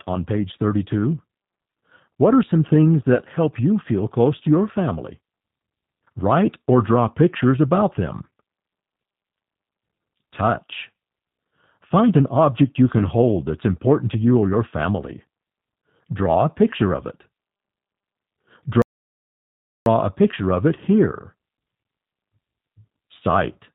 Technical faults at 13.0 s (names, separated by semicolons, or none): G.729 codec; VoIP packet loss concealed by the speech codec